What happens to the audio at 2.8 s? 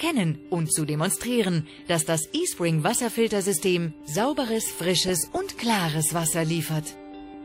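Nothing goes wrong at 2.8 s; the audio plays through that moment intact, with no dropout, click, or distortion.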